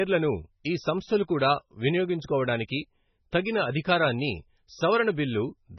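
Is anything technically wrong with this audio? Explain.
Yes. MP3 compression, heavy, runs throughout the speech, with nothing above 6 kHz. The sound fits a very low bitrate of about 16 kbps: the encoder likely cut the treble and dropped weak frequency lines frame by frame, leaving a watery, swirly texture and smeared attacks.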